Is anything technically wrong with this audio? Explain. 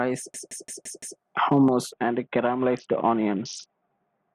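Yes, there are two faults in this speech clip.

From 0.34 to 1.2 s there is a system hang loop. The system stalled while the audio hardware kept replaying one 170.7 ms stretch of its buffer, which fits an 8192-sample buffer. It repeats five times at about 5.9 Hz, producing a machine-gun stutter, and roughly a second of audio is lost. On a waveform the same block appears copied end to end, and a spectrogram shows identical vertical slices at a regular spacing.

From 1.92 s to the end there is a Bluetooth SBC bit pool drop. Under link congestion the encoder lowered its bit allocation, which points to a fall from a bit pool of 28 to about 5, near 54 kbps. The upper sub-bands lose their bits and the rest are coarsely quantised, so the treble dulls and a gritty hiss rises. A spectrogram shows the top bands going dark, with grainy speckle below.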